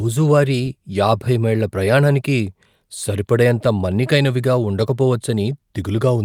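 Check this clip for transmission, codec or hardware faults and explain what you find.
No faults can be heard anywhere in the speech. There is nothing to place in time or explain.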